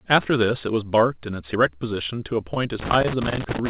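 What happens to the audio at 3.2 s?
At 3.2 s the audio is inside a burst of loose connector crackle running from 2.80 s to 3.70 s: a failing contact rapidly making and breaking, chopping the speech into irregular scratchy crackle.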